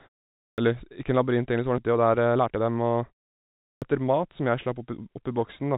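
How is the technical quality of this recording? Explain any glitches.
The recording has three kinds of glitches: two clipped onsets, one forward skip, and a stretch of sped-up playback. The band stops near 4 kHz, which fits a G.711 mu-law call path at 64 kbps.

Clipped start after a pause, at 0.35 s and 3.59 s. Each time, sound resumes after a short silence of 0.35 s and 0.54 s. The first 0.23 s or so is missing, so the speech begins abruptly. The output device has likely dropped into a low-power state during the quiet. It needs that fraction of a second to wake and lock again, and the opening sounds are lost meanwhile.

Skip ahead, at 1.78 s. Playback jumps forward with no gap and no fill. Roughly a second of speech is simply gone. The two sides are butted together almost directly. Later audio was already queued, so a block was discarded to catch up. That cut the delay by about a second in one step. 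The result is an abrupt splice where continuity breaks.

Jitter buffer speed-up, from 1.88 s to 4.27 s. Speech runs at about 116% speed while the pitch stays unchanged. It sounds hurried for over two seconds. The buffer was holding more audio than its target. To shrink it, the receiver repeatedly cut out tiny slices, one or a few pitch periods long. In total the cuts came to about 0.4 s. The pacing feels rushed, though the pitch does not shift.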